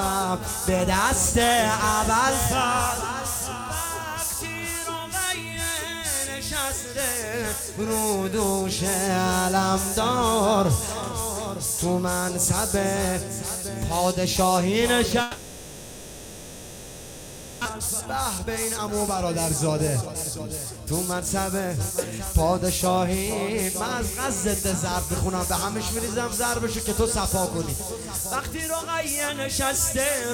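From 15.21 to 17.67 s the sound gives way to a smeared buzz that fades into low steady noise with no true silence, the likely result of a long network dropout. About 1.6 s of audio never returns. On a spectrogram, harmonics stretch flat, then thin into a faint noise floor.

A jitter buffer speed-up follows as the receiver works off roughly 0.7 s of built-up delay. From 17.69 to 19.25 s the audio runs at 125% speed, and from 19.67 to 22.43 s at 115%, each pass removing roughly 0.4 s. It sounds hurried but keeps its pitch. The waveform shows compressed rhythm and steady periodicity.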